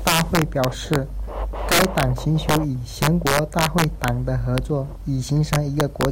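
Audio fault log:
0.07–0.96 s, 1.72–2.03 s, 2.49–2.57 s, 3.02–4.08 s, 4.58 s, 5.53–6.05 s: integer overflow. Speech peaks exceed the integer limit by up to about 9 dB and wrap to the opposite sign instead of being clamped, so each overshoot jumps across the full range as a violent crack, harsher than clipping.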